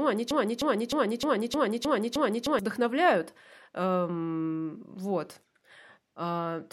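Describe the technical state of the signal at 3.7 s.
At 3.7 s the signal is intact, with no dropout, clipping, distortion or other technical fault to be heard.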